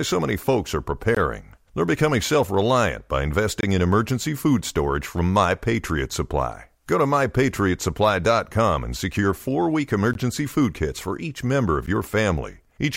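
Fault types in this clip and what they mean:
Block of digital silence: four abrupt ticks and short holes, 12 to 23 ms long, where the sound drops to silence, which fits unfilled 512- or 1024-sample output buffers.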